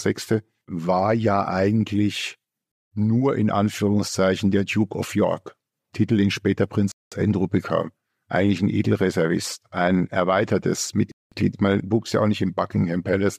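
The speech was delivered in 4-second chunks with 200 ms of silence inserted between them, so hard-edged holes interrupt the flow after "war ja eigentlich" at 2.72 s, "den später" at 6.92 s, and "ein erweitertes" at 11.12 s. This is a gap between chunks.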